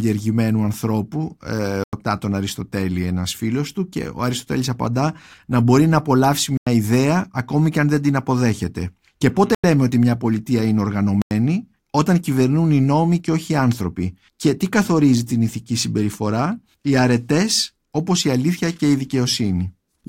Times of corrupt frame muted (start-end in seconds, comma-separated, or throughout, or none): 1.84-2.01, 6.57-6.67, 9.54-9.64, 11.22-11.31